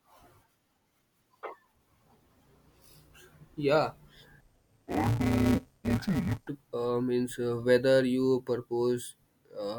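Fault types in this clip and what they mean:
Interleaved audio read as planar: alternating left-right samples were read as block halves, leaving the speech dull and robotic with a 172 Hz buzz.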